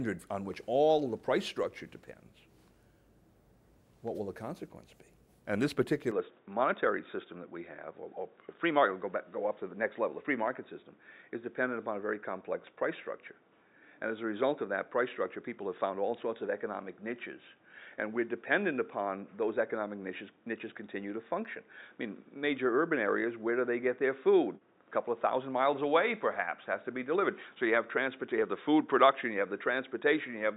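At 6.11 s the input was likely switched to a poorer device, which passes a narrower band. From there to the end, nothing above 3.8 kHz gets through, so the sound turns dull and boxy at once. There is no gap at the switch, the level stays about the same, and the new background noise sits far below the signal.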